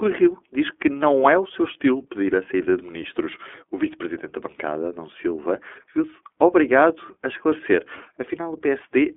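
From start to finish, the speech carries the iLBC codec. This narrowband VoIP coder codes each 20 ms frame on its own, never leaning on the frame before. The band is held to roughly 250 Hz to 3.4 kHz, and nothing survives above 3.6 kHz. That cut-off and the plainly audible coding damage fit the 15.2 kbps mode. Sibilants lose their bite and the tone turns boxy. The speech stays clear but sounds rough and slightly synthetic.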